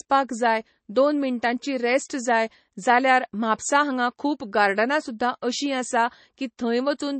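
Throughout the speech, the audio was likely squeezed through MP3 compression at a very low bitrate, which fits roughly 32 kbps. Short of bits, the encoder removed everything above about 8.3 kHz and dropped weak frequency detail, leaving dull, watery, swirling speech.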